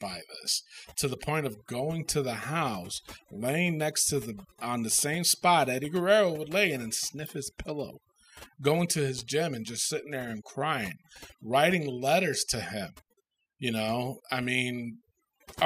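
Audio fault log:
Throughout: overdone noise removal. The noise reducer here is pushed so hard that any frequency band sitting near its idea of the noise floor gets pulled way down or shut off. Quieter bits of the speech get dragged out with it. So the background drops and breaks up into little twinkling specks.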